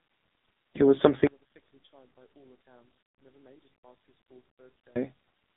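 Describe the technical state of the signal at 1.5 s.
At 1.5 s the speech carries heavy AMR narrowband mobile codec damage. Nothing passes above 3.7 kHz. The buzzy, synthetic quality suggests a low rate, around 5.9 kbps.

The level has also collapsed by about 37 dB, from 1.27 to 4.96 s. This is likely one channel inverted, so the shared centre cancels when summed to mono.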